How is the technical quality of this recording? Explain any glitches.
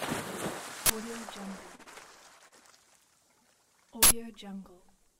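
The recording has clear technical faults: two bursts of garbage data, a pair of concealed dropouts and one brief stall.

Uninitialised buffer: at 0.86 to 0.90 s and again at 4.03 to 4.11 s, a buffer was played out before any audio had been written into it, so whatever stale memory it held was read as samples. The result is a sudden, loud blast of digital noise lasting 40 ms and then 80 ms, which fits whole blocks of those lengths. On a waveform these are abrupt slabs. A spectrogram shows broadband vertical bars, with tonal lines possible if the leftover values repeat.

Short concealed packet loss: two back-to-back gaps, at 1.75 to 1.82 s and 1.83 to 1.89 s, each with about 40 ms of audio that never arrived. The decoder covered them by extending the preceding sound, roughly 34 ms and 29 ms of synthetic fill, then crossfaded back. This is heard as a quick smear or wobble, and anything brief in that stretch can disappear. 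On a spectrogram, harmonics flatten or repeat unnaturally, or turn into shaped noise, with soft seams at each boundary.

Short stall from a late packet: between 2.48 and 2.61 s, a packet came late and the jitter buffer ran dry. The receiver stretched the last sound by about 37 ms until the data turned up, then carried on from where it stopped, so nothing is lost. The timing shifted by 37 ms, and about 9 ms was later trimmed to catch up. It sounds like a momentarily held sound with a faint buzz or dip. A spectrogram shows a short, frozen, elongated segment.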